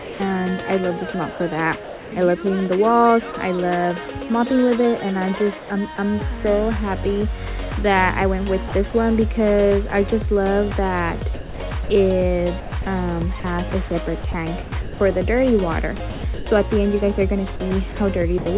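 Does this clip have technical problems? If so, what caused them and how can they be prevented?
Yes. The audio is choppy in three stretches, from 0.0 to 3.34 s, 5.58 to 5.98 s, and 8.68 to 18.46 s, where about 600 ms, 140 ms, and 1.44 s of sound are replaced by a synthetic comfort-noise hiss. This is likely sound chopped by the voice detector: it toggled transmission on and off and filled the gaps with comfort noise, all over a band-limited path with nothing above 4 kHz. To prevent it, disable voice activity detection or add longer hangover time and lower its threshold.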